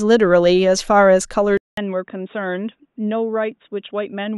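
At 1.57 s the speech drops out for 200 ms, then returns dull and boxy, with nothing above 3.8 kHz. It is noticeably quieter, roughly 10 dB down, and a new faint noise floor sits underneath. The likely cause is the input switched to a poorer device, running to the end.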